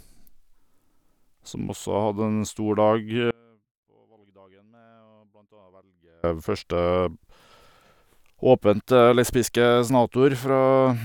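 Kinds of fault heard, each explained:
Audio dropout to a faint residue: the speech cuts out abruptly from 3.31 to 6.24 s, leaving only a faint trace roughly 35 dB down. This is likely a break upstream while the later path stayed live. A pause or fade would not start and end so suddenly.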